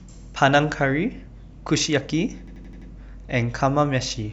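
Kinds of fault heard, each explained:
System hang loop: the system stalled while the audio hardware kept replaying its ring buffer, so one 85 ms slice of speech repeats exactly five times from 2.48 to 2.90 s, a machine-gun stutter at about 11.7 Hz that fits a 4096-sample buffer.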